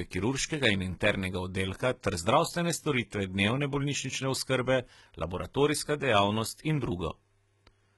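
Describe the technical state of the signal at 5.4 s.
At 5.4 s the speech carries heavy HE-AAC compression damage, present throughout the clip. The treble above the coded band is rebuilt from copied lower bands, so s sounds turn gritty and lispy, nothing sounds above 11.8 kHz, and this likely points to a bitrate near 16 kbps.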